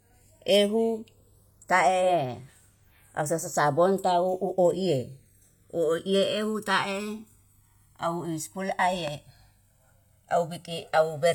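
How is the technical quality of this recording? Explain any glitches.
The recording has three technical problems: a slow flanging, leftover artefacts of an earlier low-bitrate encoding with a ceiling near 18.5 kHz, and a single loud pop.

Channels drifting apart, throughout: the two channels were captured on separate clocks, differing by roughly 200 parts per million, so the delay between them slides to around a millisecond and a half by the end. Summed to mono, comb notches sweep slowly through the speech, heard as gradual flanging.

Low-bitrate audio saved at a high bitrate, throughout: the speech carries the artefacts of an earlier encoding and nothing above 18.5 kHz, which points to a low-bitrate HE-AAC encode near 40 kbit/s that was likely re-saved as a high-bitrate MP3 around 256 kbit/s. The larger file cannot restore the detail the first encoding discarded.

Loud pop, 9.08 to 9.10 s: a sudden voltage pulse, likely from static or a plug or switch transient, was added to the signal and shaped by the following circuitry. 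It sounds as one sharp pop, roughly 10 dB above the speech, which continues underneath.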